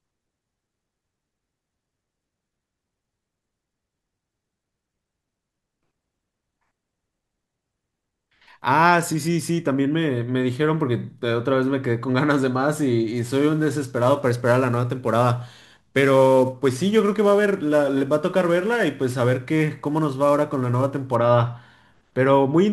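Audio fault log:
13.16 to 21.16 s, sample clock jitter: the converter's clock wanders by around 10 microseconds, so each sample lands slightly off time. Faster-changing parts of the speech suffer most, adding a gritty hiss roughly 25 dB below the signal that fades in pauses.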